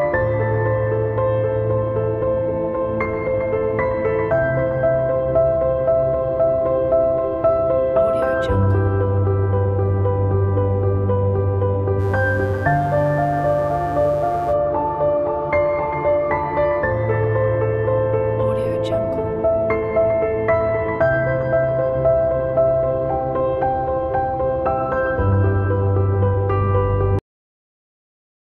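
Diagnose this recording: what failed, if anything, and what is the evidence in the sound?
Mains buzz enters at the analogue wiring stage from 11.97 to 14.56 s: a raspy, steady buzz around 25 dB below the signal. Sharp switching spikes from a dimmer, rectifier or poor shielding repeat twice per 60 Hz cycle, spreading harmonics up into the kilohertz range.

A cut-off end occurs at the buffer or storage stage at 27.19 s. The sound stops mid-event and falls straight to digital silence with no decay, because the final buffers were never written, so the tail of the audio is simply missing.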